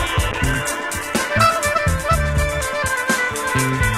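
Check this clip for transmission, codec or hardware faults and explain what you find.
A call bitrate drop affects the audio from 0.33 s to 1.69 s. The sound turns rough and muffled, its high frequencies gone, for about 1.3 s before clarity returns. The call's bandwidth estimate collapsed, forcing the encoder to code far more coarsely, which fits a fall from around 96 kbps to roughly 12 kbps.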